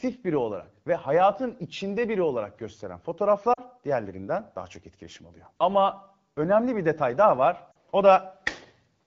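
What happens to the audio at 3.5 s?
Lost AMR speech frames between 3.53 and 3.60 s, right after "içinde biri olarak gösteren" and before "diğerlerinden daha çok etkileşim". Radio errors corrupted the frames, so the wideband decoder discarded them and filled the gap by replaying the last good pitch and vocal tract settings at falling gain. About 40 ms of speech is lost, which suggests two 20 ms frames. It is heard as a brief drop to near silence before the voice comes back weak or rough for a moment.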